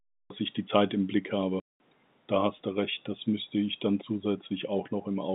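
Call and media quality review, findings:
Cut-off start at 0.30 s. Speech begins from digital silence mid-sound, just before "ich die". No natural attack. Capture or stream started late.

Packet loss filled with silence, 1.60 to 1.80 s. A hard-edged 200 ms hole in the speech, which fits ten lost 20 ms packets. Receiver inserted silence.

Audio is band-limited to roughly 150 Hz to 3.7 kHz, consistent with the G.711 telephone coding in the path.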